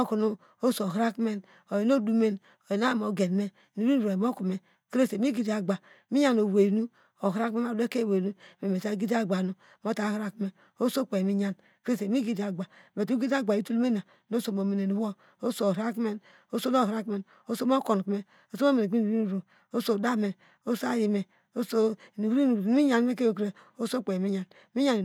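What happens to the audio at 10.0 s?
Nothing goes wrong at 10.0 s: the speech carries on intact through that moment, with no dropout, click, distortion or other fault to be heard.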